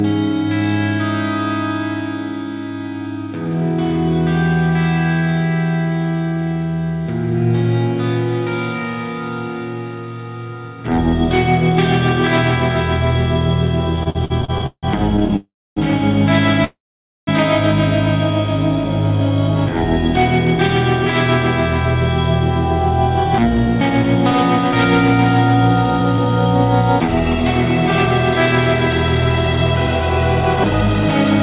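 From 13.96 to 15.34 s, packets kept arriving late or more slowly than they were played out, so the jitter buffer ran dry 15 times in a row. This is repeated stalls, or stutter. Each time, the receiver stretched the last bit of sound until data resumed. Those fills add up to about 424 ms, nearly a third of the span, and the longest lasts 164 ms. Nothing is lost, but the audio drags and hiccups along in short jerks.

Right after that, from 15.36 to 15.78 s, comes a call audio freeze, likely from packets held up in transit that emptied the buffer completely. The sound carries on as a fading continuation for a moment and then drops to silence for about 270 ms, adding roughly 0.4 s of gap before the audio picks up where it stopped.

A second call audio freeze follows from 16.64 to 17.29 s. It is also likely due to delayed packets. This gap is longer, about 0.63 s in total, and roughly half a second of it is silent.

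Between 23.24 and 24.73 s the buffer was holding more audio than it aims for. To bring the delay back down, the receiver trimmed out short pitch-period slices, around 40 ms in all. This is a jitter buffer speed-up. The sound runs about 3% fast at unchanged pitch. Throughout, nothing reaches above 4 kHz, which points to a narrowband telephone codec such as G.711.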